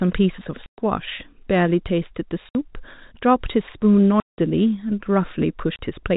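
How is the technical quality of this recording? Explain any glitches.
The recording has four dropouts from packet loss filled with silence, heard through a telephone-band channel whose G.711 coding caps the audio at 4 kHz. The holes fall at 0.66 to 0.78 s, 2.49 to 2.55 s, 4.20 to 4.38 s and 5.76 to 5.79 s, lasting 120, 60, 180 and 30 ms. Those lengths are all multiples of 30 ms, which fits 30 ms packets. Whole packets never arrived, and the receiver played silence in their place. The speech cuts out abruptly at each hard edge.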